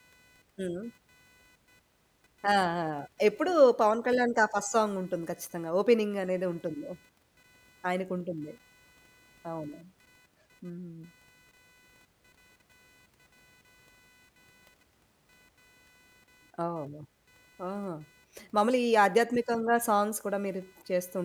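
Speech recording with computer activity noise running throughout: a buzzing, chirping layer pulsing at around 500 Hz, roughly 35 dB below the speech. It tracks processor, graphics or mouse load rather than the talking, as shifting current draw disturbs the audio circuit's shared ground.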